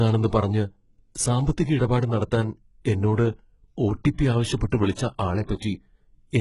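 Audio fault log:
throughout HE-AAC compression: likely a low-bitrate HE-AAC stream around 12 kbps, with treble rebuilt from copied lower bands, leaving gritty, lispy sibilants and nothing above 11.1 kHz.
1.15 s pre-echo: coding noise spread across a transform block smears backward before the attack of "സാമ്പത്തിക ഇടപാട് നടത്താൻ എന്നോട്", adding about 10 ms of hiss and softening the onset.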